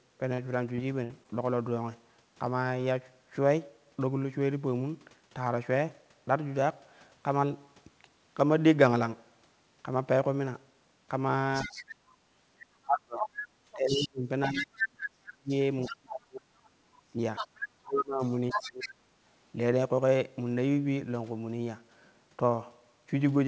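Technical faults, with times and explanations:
0.34–0.40 s, 0.76–0.80 s and 1.23–1.27 s: short concealed packet loss. Roughly 40 ms, 20 ms and 20 ms of audio failed to arrive in time. The decoder extended the preceding sound to bridge each hole and then cross-faded back into the real signal, which gives a quick smear or wobble. On a spectrogram the harmonics run unnaturally flat and unchanging for those few frames. In the waveform a repeated cycle shape appears, followed by a soft seam where the real signal resumes. The third gap was bridged for only about 12 ms.
1.04–1.11 s: burst of packet loss. About 60 ms went missing at once, too long to bridge convincingly. Concealment held the last sound for about 56 ms while turning it down, so it comes out as a brief held sound that decays before the audio picks up further along, with that stretch gone. The spectrogram shows a frozen, fading band ending in a sharp resumption. 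In the waveform the envelope tapers and then jumps back to full level.
11.54–11.95 s, 12.98–14.84 s, 15.82–15.94 s and 17.36–18.89 s: other side's voice leaking through. A second voice sits under the main talker, about 15 dB down in the short scraps and only about 5 dB down in the two longer stretches. This is likely loudspeaker sound reaching the microphone that the echo canceller left behind. On a spectrogram a second set of harmonics runs independently of the main one. The waveform shows extra low-level activity filling what should be pauses.
11.65–11.70 s, 12.84–17.20 s and 17.77–19.07 s: speech suppressed in double talk. While the far side was active, the near talker was pushed down, likely because the echo canceller attenuated everything rather than separate the two voices. The first dip is brief and shallow at about 5 dB. The later stretches are pushed down by as much as about 35 dB, over roughly 3 s and 1 s in total. 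On the spectrogram the energy dims in patches, within a band that stops near 8 kHz, consistent with G.722 at 64 kbps. The waveform shows a gated, notched envelope.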